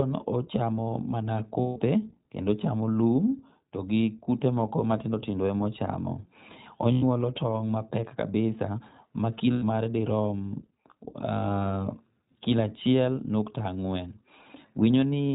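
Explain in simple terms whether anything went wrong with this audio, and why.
The speech runs through the iLBC codec, a narrowband phone-style codec. It keeps nothing above 4 kHz, so the sound is muffled and lacks crispness. Each short chunk is coded on its own, which leaves the voice plainly rough and slightly synthetic throughout.

There are also lost iLBC frames at 1.60 to 1.79 s (about 160 ms), 6.92 to 7.04 s and 9.52 to 9.64 s (about 100 ms each). The decoder fills each gap by repeating the last bit of voice with noise, giving a brief held, buzzy vowel before normal speech resumes.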